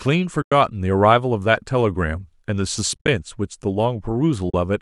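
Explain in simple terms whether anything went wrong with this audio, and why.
The speech drops out briefly three times, at 0.42–0.52 s, 2.94–3.08 s (a few short gaps bunched together) and 4.50–4.54 s. That's AAC frame loss with muting: chunks of the stream went missing, so the decoder played silence, fading smoothly out and back in.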